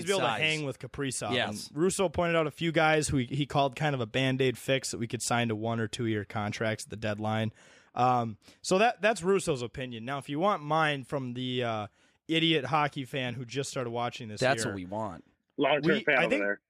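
Speech recording, and nothing is technically wrong with it.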